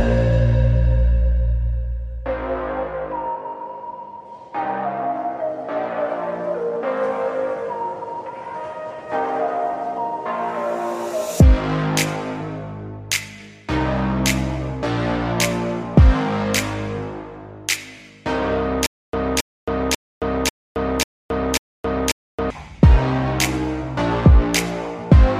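From 18.86 s to 22.50 s the audio stutters with silent gaps: a fragment about 272 ms long plays, drops into about 270 ms of dead digital silence, then returns unchanged, six times over at a steady 542 ms cycle. The likely cause is a stalled player or stream that replayed its last buffered fragment on each retry and then ran dry, so the audio that belonged in that stretch never plays.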